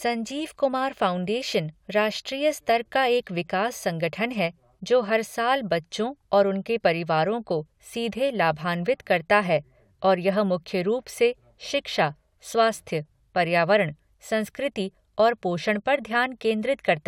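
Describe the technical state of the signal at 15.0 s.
Nothing in the signal at 15.0 s points to a technical fault: the audio is intact at that moment.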